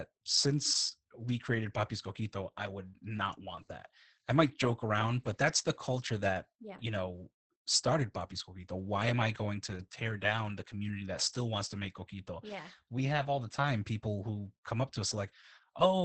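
Opus voice compression runs through the whole clip, with heavy damage. The speech is coded by the SILK linear-prediction coder alone, and the band stops at 8 kHz, which fits a wideband setting at a bitrate near 10 kbps. At that rate the excitation is coded coarsely in short frames, likely 20 ms each. The speech therefore sounds muffled and hoarse with a slightly robotic edge, and the top end is missing.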